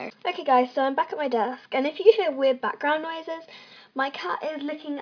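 No technical faults are audible.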